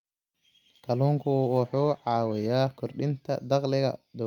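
From 1.16 s to 2.57 s there is a call bitrate drop. The encoder's bit budget falls for about 1.35 s, which fits a drop from around 64 kbps to roughly 21 kbps. The coarser coding makes the speech rough and watery until it recovers.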